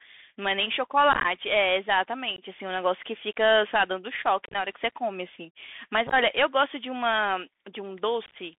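Throughout, the speech passes through the Bluetooth CVSD headset codec. This one-bit delta coder's adaptive step cannot keep up with loud high-frequency content, so s sounds turn scratchy over a granular hiss. The band is held to about 200 Hz to 3.5 kHz, which fits a 64 kbps CVSD link.

Unconcealed Bluetooth headset packet loss occurs at 1.13–1.26 s, 2.36–2.42 s, 4.46–4.56 s, 6.07–6.14 s and 8.26–8.36 s. At each point, lost packets leave short silent holes with abrupt edges. Where the losses are scattered, as in the 75 ms lost across 120 ms at 1.13 s, the speech sounds chopped and crackly. The longest single gap is about 26 ms, at 4.46 s.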